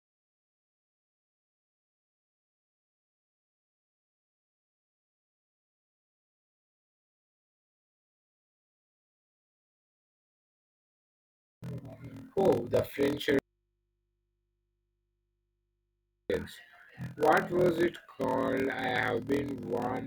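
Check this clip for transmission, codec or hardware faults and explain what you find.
Two faults are present in the speech.

A block size mismatch (padded) runs throughout: 1024-sample writes zero-filled to longer reads, giving a 41.7 Hz buzz and 0.889x speed at normal pitch, unlike resampling.

From 13.39 to 16.30 s, an audio dropout to a faint residue leaves 2.91 s of mains hum around 50 dB down, likely a broken input feed. The cut is abrupt, not a fade.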